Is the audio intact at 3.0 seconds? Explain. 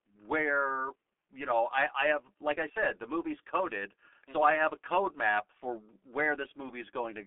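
No. At 3.0 s, as across the whole clip, the speech carries G.723.1 codec damage. The 30 ms frame coding, consistent with a bitrate near 6 kbit/s, leaves nothing above 3.7 kHz and smears the voice model, so the speech sounds muffled and hoarse, with blurred consonants.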